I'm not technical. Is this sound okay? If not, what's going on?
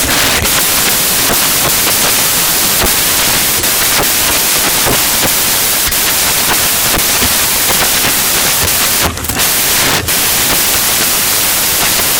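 No. Samples built from the wrong bytes affect the whole clip, from start to finish. Digital audio stores each tiny slice of sound as a number split across several bytes, and here those bytes were put back together in the wrong order or shifted by one. The small, fast-changing details end up treated as the big values, so you hear loud hiss like static.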